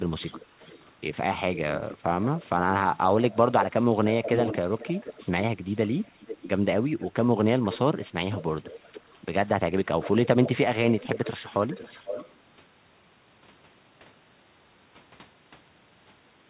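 An echo canceller likely let loudspeaker pickup through, producing echo leak: a copy of the speech trailing about half a second behind, faint at 0.19–0.86 s and louder at 1.55–7.07, 8.32–9.19 and 9.85–12.33 s.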